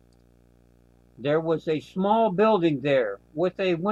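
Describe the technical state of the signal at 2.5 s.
Video or display buzz is present at 2.5 s and runs through the whole clip. A screen or video cable is coupling into the audio path, laying a 60 Hz buzz at the picture's field rate, with hash above it, well below the speech.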